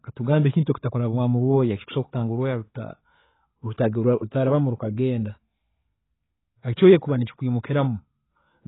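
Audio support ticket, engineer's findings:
Speech dull and band-limited throughout, nothing above 3.9 kHz. Smeared, warbling sibilants. Likely AAC compression at a very low bitrate, around 16 kbps, with a lowered cut-off and coarse quantisation.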